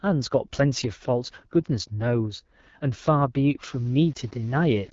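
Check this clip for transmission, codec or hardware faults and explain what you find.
Two faults are audible in this speech. The first runs throughout. The second begins near the end.

The AMR wideband (HD Voice) codec runs the whole clip. Speech is rough and raspy, with nothing above 7.5 kHz. That fits the low 8.85 kbit/s mode, where the pulse-driven vocal model is starved of bits. The band still reaches past telephone narrowband, which sets it apart from an older phone codec.

Low bit depth without dither appears from 3.63 s to the end. A grainy distortion, around 30 dB below the signal, follows the loudness. This is likely rounding to about 7 bits. Unlike the codec rasp, it starts abruptly at that point.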